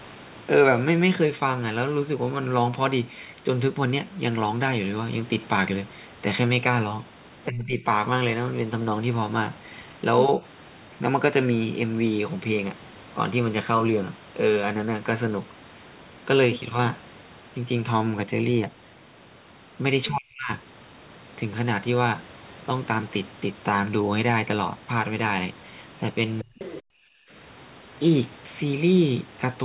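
At 7.48 s the speech sinks by roughly 20 dB for about 0.4 s, thinning and fading before recovering at 7.85 s. The same dip returns much deeper at 20.08 to 20.51 s, close to 40 dB, where the speech nearly vanishes, and again briefly at 26.42 to 26.58 s, around 30 dB down. This is speech suppressed in double talk. The likely cause is that the other end talked at the same moment, and the echo canceller, unable to tell the local talker from loudspeaker echo, attenuated everything in the microphone path.

Immediately afterwards, from 26.59 to 26.82 s, a faint second voice surfaces, sitting roughly 15 dB under the main speech and sounding like a stray scrap rather than part of the recording. This is the other side's voice leaking through, likely residual echo: the far talker played from the loudspeaker, reached the microphone, and was not fully removed by the canceller, so part of it passed on.

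At 26.86 s the room sound drops out abruptly by about 40 dB for roughly a tenth of a second, then returns at 26.97 s. This is background gated by the echo canceller. Just after the leaked echo, the canceller clamped the microphone down hard while the loudspeaker was active, silencing the ambience until it released. The 4 kHz ceiling on the audio throughout fits a narrowband telephone codec on the call path.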